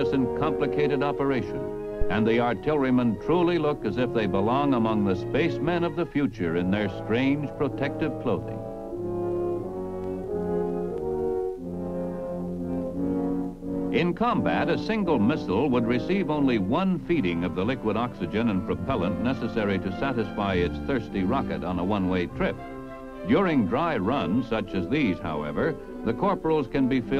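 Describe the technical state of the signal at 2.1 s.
At 2.1 s the signal is in the middle of a deep thump that runs from 2.02 to 2.19 s. It jumps to about -12 dBFS and then dies away with a decay of roughly 39 ms. This is a phantom power thump. Phantom power or another supply was switched on or off while the input was live, and that sudden DC step passed through the coupling capacitors as a low-frequency pulse.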